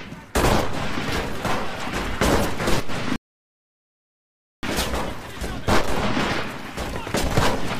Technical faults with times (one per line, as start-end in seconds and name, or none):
3.16-4.63 rebuffering stall